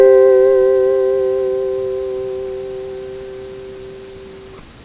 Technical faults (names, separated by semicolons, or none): none